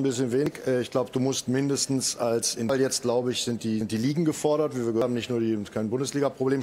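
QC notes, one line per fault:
0.46 s, 2.69 s, 3.81 s, 5.02 s: dropped buffer (overrun). At each point the sound jumps forward with no pause, losing roughly a tenth of a second at 0.46 s and 3.81 s, about 0.2 s at 5.02 s and about 0.3 s at 2.69 s. This is likely an overrun: samples were overwritten before being read, so the surviving sides are spliced straight together. On the waveform the trace continues without a silent gap but changes shape abruptly at the seam. On the spectrogram there is no blank column, only a sudden break where the pattern resumes at a later point.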